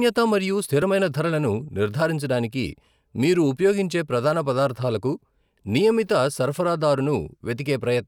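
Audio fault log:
0.65 to 0.82 s, processor overload crackle: for a bit under a fifth of a second the speech gets a gritty, tearing crackle laid over it. The processor couldn't finish its buffers in time, so about five short chunks, around 10 ms each, missed their deadlines and were simply skipped rather than filled with old audio. Each skip leaves a small hard-edged hole, and strung together they come across as a burst of crackle that stops once the load drops.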